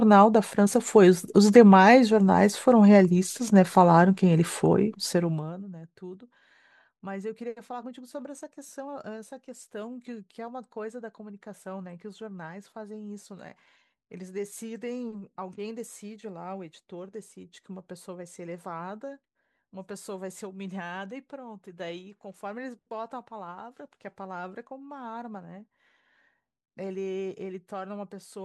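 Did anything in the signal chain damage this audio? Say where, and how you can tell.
No, nothing in the chain audibly damaged this speech; I can find no stage whose fingerprint shows up in the sound.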